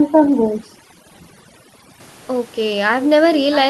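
A short speech recording where the first two seconds, from 0.0 to 2.0 s, suffer from overdone noise removal: the background drops away and breaks up into little twinkling specks because the suppressor is clamping down on frequency bands it mistakes for noise, taking the quieter parts of the speech with them. Right at the end, from 3.51 to 3.57 s, a brief faint copy of the voice turns up roughly 0.65 s late and well below the main level, likely an echo leak from a loudspeaker on the far end that the echo canceller didn't fully catch.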